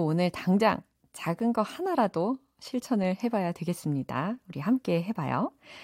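No technical faults can be heard in this speech recording at any point.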